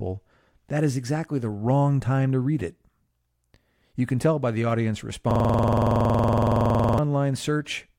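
Right after "tell by the audience", at 5.31 s, the speech locks into a system hang loop until 6.99 s. The driver stalled while the hardware kept replaying its ring buffer, so one 46.4 ms slice, which fits a 2048-sample buffer, repeats 36 times at 21.5 Hz. It sounds like a rough, rattling stutter. The waveform shows identical repeating blocks, and the spectrogram shows frozen vertical banding with harmonics spaced 21.5 Hz apart.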